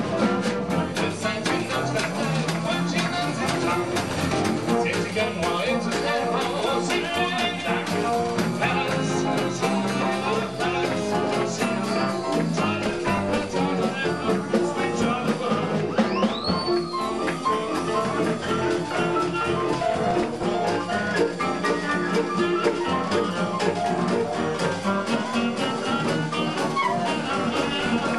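The audio sounds dull, with a gurgling, granular edge throughout, likely MP2 compression at a low rate, something around 80 kbps. There's DAB burbling at 4.09–4.37 s, 12.77–13.54 s, 19.74–20.55 s and 27.66–27.96 s: short blips of noise where a sprinkling of bit errors (well under one percent) corrupts individual sub-bands.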